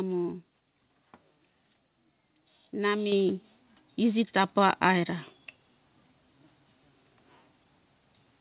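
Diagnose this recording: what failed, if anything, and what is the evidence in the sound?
The fault is a microphone volume stepped up, in the call processing stage. At 3.12 s the whole signal jumps by about 6 dB at once. The speech and the background noise rise together, so nothing changed at the source. The call software judged the input too quiet and raised the device's input volume in a single step. The band stops at 4 kHz, which fits a G.711 mu-law call path at 64 kbps.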